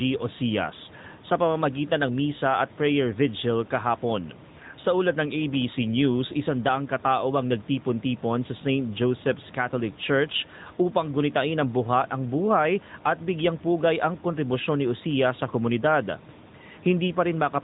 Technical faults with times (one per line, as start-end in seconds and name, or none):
0.00-17.64 AMR narrowband mobile codec